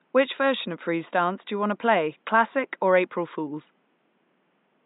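No technical faults can be heard anywhere in the speech. The room's background noise sits about 45 dB below the speech, part of the recording itself rather than anything the system added.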